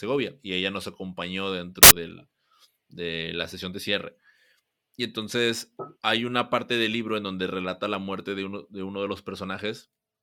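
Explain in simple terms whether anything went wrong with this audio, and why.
Something did go wrong, briefly: from 1.83 to 1.91 s the speech turns into a burst of loud hiss. That's samples built from the wrong bytes. The player glued each sample's bytes together wrongly, so the jittery fine detail became the loud part, giving loud, harsh noise.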